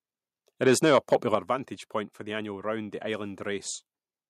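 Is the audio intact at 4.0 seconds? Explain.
Yes, at 4.0 seconds the speech plays through cleanly, with no dropout, click, distortion or other fault to be heard at that moment.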